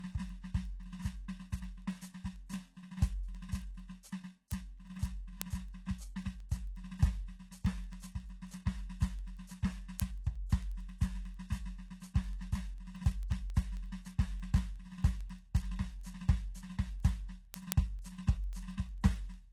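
From the very start the music has a gritty, metallic top end, with cymbal-like and sibilant detail sounding lispy, and nothing at all above about 12.3 kHz. This is plainly audible HE-AAC compression, likely at a very low rate in the region of 16 kbps. Only the lower spectrum is truly coded. The treble is synthesised by copying lower bands upward, so its harmonics no longer line up with the real ones below.

From 0.12 s to 19.52 s a steady stream of sharp ticks runs under the music, roughly ten per second and some two hundred in all, varying in strength. These are word clock ticks. A digital link is being received by a device running on its own clock, off from the sender's by something like 200 ppm. Each time the two clocks slip past each other, a single sample is dropped or repeated.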